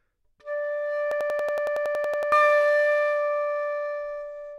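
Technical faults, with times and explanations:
1.12–2.32 s, system hang loop: a rapid machine-gun stutter as one 93 ms slice repeats 13 times at 10.8 Hz, likely a frozen driver replaying a 4096-sample buffer.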